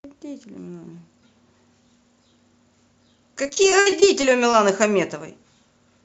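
From 3.43 to 4.55 s, repeated packet loss (robotic sound) hits the speech: packets keep going missing, and each hole, up to 59 ms long, is patched by extending the preceding sound. Roughly a fifth of that stretch is concealed, giving a choppy texture with pieces missing.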